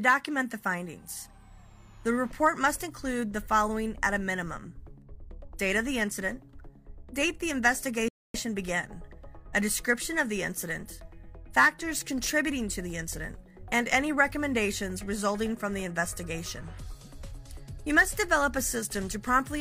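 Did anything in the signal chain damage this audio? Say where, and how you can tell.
Yes, at the playback stage: a rebuffering stall from 8.08 to 8.34 s. The sound cuts to silence for about 0.26 s, then picks up exactly where it left off, because the player exhausted its downloaded audio and paused until more arrived. What separates this from a network dropout or packet loss is that no audio is missing and nothing is concealed or skipped: the material is intact on either side, and only time has been added.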